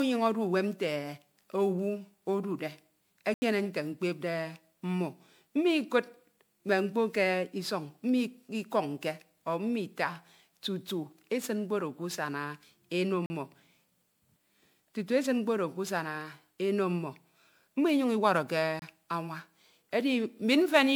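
Throughout, the speech sounds swirly, smeared and hollow, with blurred consonant attacks and nothing above about 20.9 kHz. The likely cause is generation loss: repeated MP3 decoding and re-encoding, around seven passes at a rate near 128 kbit/s, each requantising on a shifted frame grid so noise and spectral holes accumulate.

Three abrupt dropouts follow: a short hole from 3.34 to 3.42 s (80 ms), a briefer one from 13.26 to 13.30 s (40 ms), and a short gap from 18.79 to 18.82 s (about 26 ms). Each is a block of digital silence where samples were zeroed, probably because the output buffer wasn't filled in time. The cut has no fade.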